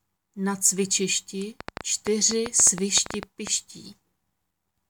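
Something in the chain is likely injecting short electrical pulses, as interference from nearby equipment or a faulty connection or power supply would, producing a train of clicks from 1.61 s to 3.48 s. Around fifteen near-identical ticks arrive at about 8 per second, unevenly spaced rather than on a steady beat. They stand out sharply, peaking roughly 15 dB above the surrounding sound, so the popping cuts through both the louder passages and any quieter gaps.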